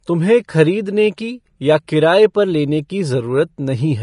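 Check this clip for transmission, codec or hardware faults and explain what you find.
Two codec faults are audible in the speech.

Vorbis compression, throughout: the most likely cause is low-rate Vorbis coding, consistent with roughly 34 kbps. The encoder removes everything above about 10.5 kHz and quantises the remaining treble so coarsely that fine detail becomes noise, giving plainly audible hiss, grain and roughened tones.

Pre-echo, at 1.87 s: the codec spreads quantisation noise across a whole transform block. An attack late in that block lets noise sized for the loud moment fill the quiet just before it, so a hiss of about 11 ms precedes the onset and softens it.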